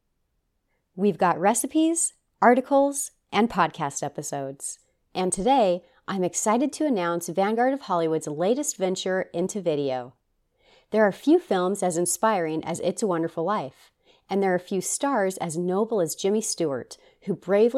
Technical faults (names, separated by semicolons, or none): none